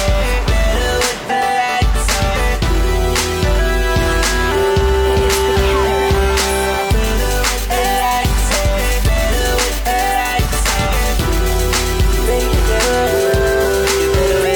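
No technical faults can be heard anywhere here.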